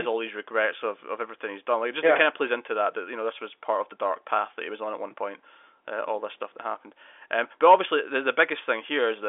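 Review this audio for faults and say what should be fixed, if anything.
Nothing needs fixing: the speech sits in a telephone band of roughly 300 Hz to 3.5 kHz with nothing above about 3.7 kHz, as expected from G.711 mu-law telephone coding at 64 kbps, and that coding leaves at most faint traces of its own.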